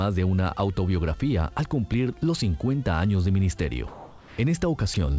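From 3.88 to 4.38 s, the background, which sits about 21 dB below the loudest passages, turns into a smooth, featureless hiss for half a second and shifts in level by about 2 dB. This is comfort noise in place of the background. The sender's voice detector heard nothing worth sending and likely paused transmission, and the receiver filled the 500 ms gap with synthetic noise shaped only roughly like the real ambience, losing its detail.

From 4.94 to 4.96 s, a 20 ms sliver of the sound vanishes into that same flat noise and returns immediately. This is sound dropped by the voice detector: the detector likely mistook this brief stretch of sound for background and stopped sending, so the receiver substituted comfort noise for those 20 ms. Throughout, the call path's wideband codec leaves nothing above 8 kHz, which fits G.722 at 64 kbps.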